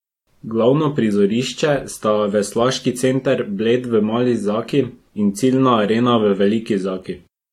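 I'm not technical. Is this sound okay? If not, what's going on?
No. Low-bitrate audio saved at a high bitrate runs throughout: the speech has nothing above about 16.7 kHz, likely because it was squeezed small once, then re-saved larger without recovering the lost detail.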